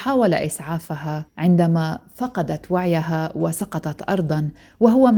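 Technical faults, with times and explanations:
3.59 to 3.61 s, lost packet rebuilt from error correction: a brief stretch of speech turns rougher and noisier but never drops out, which fits a single lost 20 ms packet replaced by the low-bitrate copy carried in the next one. Unlike plain packet-loss concealment, there is no gap, fade or buzzy repeated sound.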